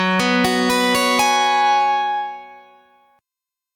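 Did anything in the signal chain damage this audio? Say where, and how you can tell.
Yes. There is gain pumping throughout the clip, at the input stage. The gain swings by around 10 dB, pulled down on each loud sound. Loud and soft parts sit unnaturally close in level, so the sound is squashed. The likely cause is input gain set far too high for the microphone, with a fast compressor or limiter clamping it down on every peak and releasing in the gaps.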